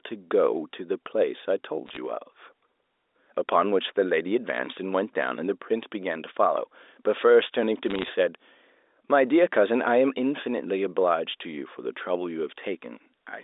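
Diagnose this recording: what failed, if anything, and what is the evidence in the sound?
Bit errors on a digital phone line, 1.86 to 1.97 s and 7.86 to 8.10 s: bursts of sharp ticks and crackle over unchanged speech. In transmission, roughly 0.4 to 0.5 percent of bits flipped on the G.711 line, each sign or high-bit hit spiking one sample.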